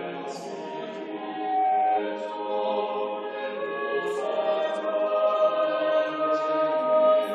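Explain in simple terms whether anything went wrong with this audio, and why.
Loudspeaker feedback squeal from 1.17 to 2.02 s: the microphone caught its own speaker, so a 757 Hz tone swelled over about 0.4 s, rising above the music.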